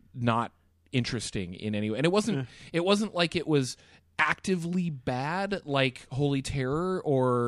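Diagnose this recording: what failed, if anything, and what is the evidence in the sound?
Nothing failed: listening through the recording, there is no evidence in the sound of any fault at any stage.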